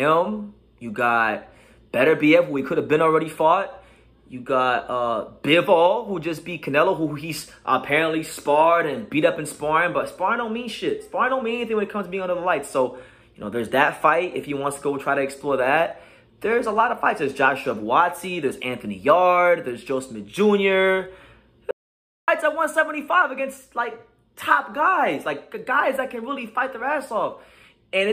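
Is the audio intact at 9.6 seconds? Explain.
Yes, at 9.6 seconds the audio is intact, with no dropout, click, distortion or other fault to be heard at that moment.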